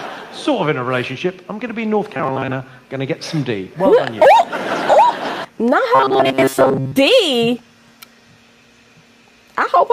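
Gain pumping runs through the whole clip. The level swings by several decibels, pulling loud and soft parts closer together, likely from excess gain and a fast limiter.

From 2.13 to 2.53 s and again from 5.95 to 6.96 s, there is robotic sound from repeated short buffers. A rigid 133 Hz buzz replaces most of the audio, likely from repeating roughly 7.5 ms chunks.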